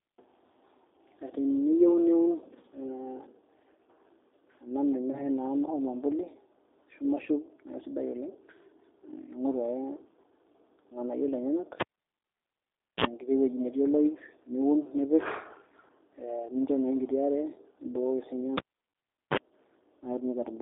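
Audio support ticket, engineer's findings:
G.729 codec, throughout: band limited to roughly 200 Hz–3.7 kHz, plainly rough and synthetic, consistent with G.729A at 8 kbit/s. Unlike a plain narrowband filter, the grain comes from pulse-coded excitation, not just missing top end.

VoIP packet loss concealed by the speech codec, 5.12–5.25 s: about 20 ms gap, fits one lost packet, bridged by a fading extrapolation that stays weak until about 5.25 s. Second event 18.91–18.95 s, about 40 ms, fits two packets, but it falls inside the unplug silence below. No pop or mains hum, which separates it from the cable fault.

Cable pulled and plugged in, 11.80–13.05 s: pop, about 1.2 s near silence, roughly 47 ms burst of 60 Hz mains buzz at partial contact, pop on return. Again 18.58–19.37 s: about 0.75 s dropout, roughly 39 ms buzz at 50 Hz. The hum and pops set it apart from codec dropouts.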